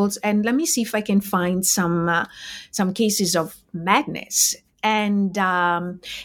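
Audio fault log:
No audible faults detected.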